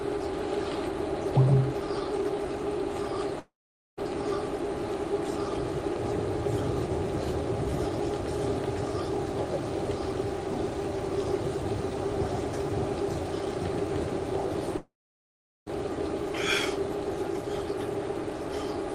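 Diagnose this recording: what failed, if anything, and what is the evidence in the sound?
Two gaps, at 3.39 to 3.99 s and 14.77 to 15.68 s, where the last sound smears into a fading buzz, then falls silent for 0.45 s and 0.75 s before resuming with material missing. That's likely a long network dropout, with concealment giving up.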